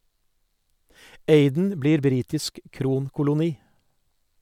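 No technical faults can be heard anywhere in the speech recording.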